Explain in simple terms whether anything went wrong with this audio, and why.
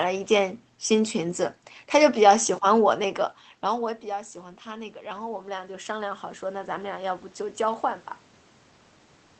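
Yes, one thing went wrong: automatic gain rising. Around 3 seconds the talker seems to drift away from the mic, so the speech suddenly gets much quieter. The system's automatic volume control notices and slowly turns itself up, from about 2.98 to 8.1 seconds. Because it boosts everything, the room noise creeps up along with the speech, so you hear the whole background swell over those five seconds.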